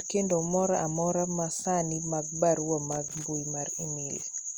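Loose connector crackle breaks into the speech from 2.92 to 3.24 s, a burst lasting about a third of a second. A worn or dirty contact somewhere in the cable path is losing and regaining contact as it shifts, so the signal is chopped on and off in rapid, uneven succession, with small pops where any DC on the line jumps. The result is an irregular scratchy crackle laid over the speech.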